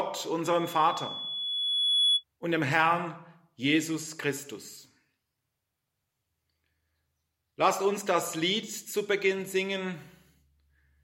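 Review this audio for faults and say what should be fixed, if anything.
Loudspeaker feedback squeal, 0.45 to 2.24 s: a 3.4 kHz tone swells over roughly a second and a half as the microphone re-amplifies its own loudspeaker, ending somewhat louder than the sound. To prevent it, lower the gain, move the microphone away from the loudspeaker, or notch out 3.4 kHz.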